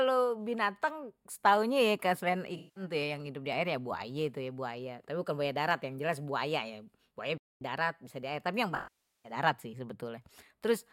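At 2.56 s a run of AAC frames went missing, and the decoder covered the gap by rebuilding sound from the last good spectrum. For about 0.27 s, up to 2.83 s, the audio turns smeared and noisy, a gap that fits roughly nine lost frames, before it clears on "tuh yang hidup di".

Right after "ya buaya", the output falls silent from 7.38 s to 7.61 s, a break of about 0.23 s in mid-flow before speech picks up again. The likely cause is a playback stall, where the player ran short of data or its thread was held up, leaving nothing to send to the output.

A longer AAC frame loss with concealment follows "tapi yang", from 8.75 s to 9.32 s. Here the decoder had to invent nearly half a second of sound, pointing to around two dozen lost frames. The filled-in spectrum degrades and fades towards silence, then the audio fades back in on "darat sih".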